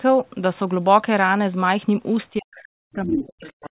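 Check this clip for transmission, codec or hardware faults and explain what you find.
Two faults appear in the last part of the clip, both pointing to echo cancellation struggling while both ends of the call were talking.

Speech suppressed in double talk, from 2.3 s to the end: the speech level falls away, sinking by as much as about 40 dB at its deepest, so the talker fades and breaks up instead of finishing cleanly. The likely cause is the echo canceller failing to separate the near talker from loudspeaker echo once the far side started speaking, and turning both down together.

Other side's voice leaking through, at 3.18 to 3.25 s: a brief scrap of a second voice pokes through, only a few decibels quieter than the talker, short rather than a sustained overlap. This is likely residual echo. The far end's voice played on the device's loudspeaker was picked up by the microphone and not fully removed, which fits with the suppression already underway, since the canceller was misjudging that stretch. 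Throughout, the audio is band-limited to 4 kHz, as expected for this call path.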